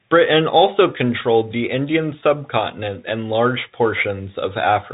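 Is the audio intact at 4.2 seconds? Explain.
No. At 4.2 seconds the speech, like the whole clip, carries Bluetooth CVSD headset codec damage. Its one-bit up-or-down steps, consistent with a 64 kbps stream, lag fast loud changes, roughening s sounds and leaving granular hiss, and nothing above about 3.8 kHz remains.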